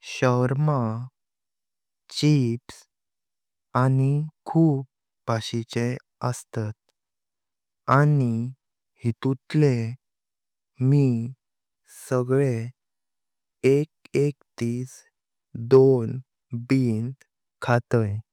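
Short bursts of crackle break into this speech clip at 7.91 to 7.95 s, 15.73 to 15.78 s and 17.71 to 17.74 s, each lasting only a few hundredths of a second on a loud peak. This is hard clipping: the signal momentarily exceeds what a stage in the chain can pass, by about 2 dB at the first two points and about 1 dB at the last, so the waveform tops are sliced flat and spray high-frequency harmonics.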